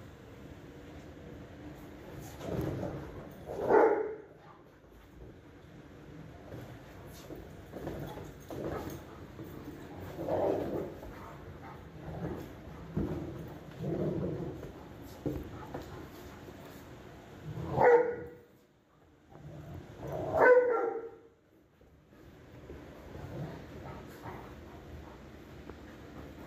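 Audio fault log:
No faults: the signal stays continuous and steady, with nothing that points to a problem anywhere in the recording or playback chain.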